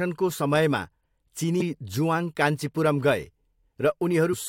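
Damaged data in a compressed stream appears at 1.60 s and again from 4.32 to 4.34 s. At both points corrupted bytes in the encoded speech make the decoder misread frames and lose sync until it finds the next frame header, leaving a brief chirp, squawk, click or short hole.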